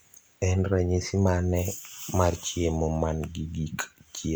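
No technical faults are audible.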